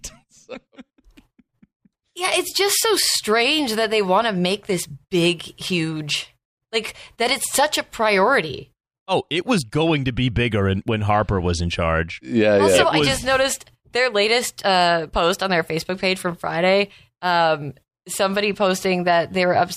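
Listening to the speech recording, nothing technical stood out.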